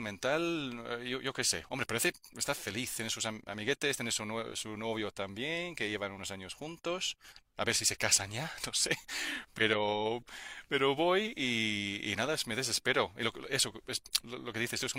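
No technical faults are audible.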